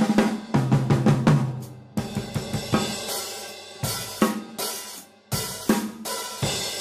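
Nothing in this recording stood out as a technical problem on listening.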